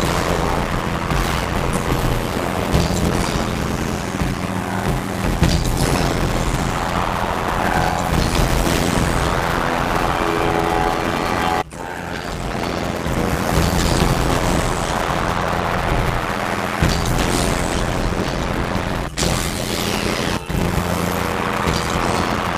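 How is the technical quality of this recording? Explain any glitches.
The recording has a clear technical fault running from start to finish: a block size mismatch (padded). One stage hands over shorter blocks than the next reads, which fits a 512-sample buffer, and zeros fill each remainder. These regular gaps produce an 86.1 Hz buzz, and the audio plays at 0.625 times normal speed while keeping roughly its normal pitch.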